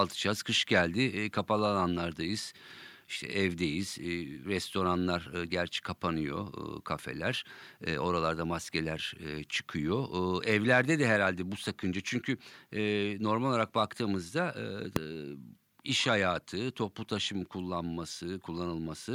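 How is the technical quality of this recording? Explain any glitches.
The recording has one glitch: a single loud bang in the speech.

Invalid numbers at full scale occur at 14.96 s, just after "normal olarak baktığımızda". A calculation produced infinite or invalid values, which were forced to the largest value the format can hold, so the output sits flat at one extreme value, far beyond the speech's peaks, for about 1.33 ms, which fits a 64-sample block. That span is too short to hear separate edges, so it comes across as one sharp, very loud bang.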